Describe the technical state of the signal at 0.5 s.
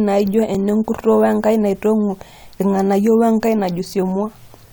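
Just after 0.5 s, at 0.55 s, there is an overlap between stream segments. The timestamps of two adjoining segments, which look to be about 2 seconds long, claim a short stretch of the same time, so the player trims that stretch away even though the sound was never actually duplicated. A few milliseconds of speech go missing and the waveform jumps across the gap, giving a single click or tiny skip in the speech.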